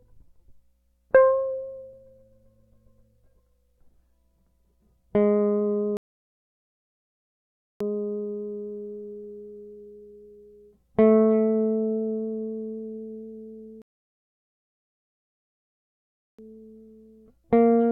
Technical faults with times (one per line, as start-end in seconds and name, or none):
5.97-7.80 rebuffering stall
13.82-16.39 rebuffering stall